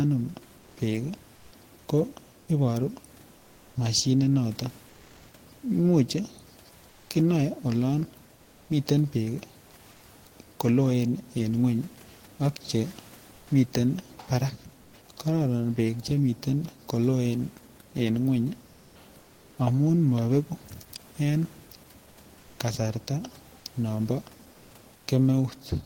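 In the pauses at 0.57–1.51, 4.89–5.33, 6.89–7.09, 9.91–10.01, 13.35–13.47, 14.81–14.93, 19.21–19.57 and 24.53–25.07 s, comfort noise replaces the background, likely from Opus discontinuous transmission. The sender stops sending during silence, so the receiver synthesises a steady, featureless hiss, sometimes up to about 2 dB quieter. On a spectrogram the room noise's detail gives way to smooth, uniform texture, and the waveform shows a flat, even noise floor.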